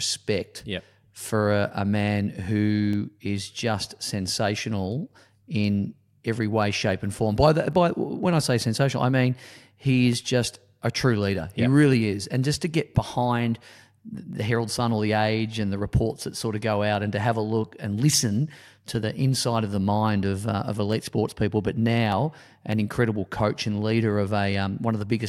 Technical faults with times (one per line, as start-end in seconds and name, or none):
0.53-25.11 clock drift buffer slips